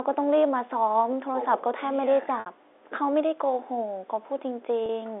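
Telephone speech over G.711 is interrupted twice by packet loss with pitch repetition. A 60 ms gap at 2.40 to 2.46 s fits two lost packets. A 30 ms gap at 4.86 to 4.89 s fits one. Each gap is bridged by repeating the last pitch period, which gives the 30 ms gap a brief held, buzzy tone, while the 60 ms gap fades out into silence before the speech returns.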